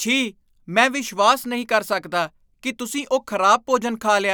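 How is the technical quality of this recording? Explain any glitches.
One glitch stands out in this speech recording. At 1.62 s, between "ਮੈਂ ਵਿਸ਼ਵਾਸ" and "ਕਰ ਸਕਦਾ ਕਿ ਤੁਸੀਂ", dropped samples likely cause a single sharp click: a couple of missing samples make the waveform jump, with no audible gap, unlike a dropout.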